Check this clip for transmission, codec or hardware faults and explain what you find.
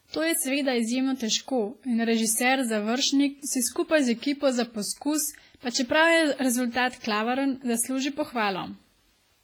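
One codec fault runs through the whole speech clip. Throughout, the speech sounds washy and ringing, with hiss that breathes with it. The likely cause is heavy WMA compression: long transform blocks smear quantisation noise over tens of milliseconds and zero weak spectral lines, which fits a bitrate near 24 kbps.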